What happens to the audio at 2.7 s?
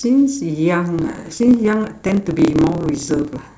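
At 2.7 s the speech carries a buzz near 36 Hz and runs about 1.16 times fast. This is a block size mismatch (truncated) from 0.96 s to the end: each block, likely 512 samples written, loses its tail when read.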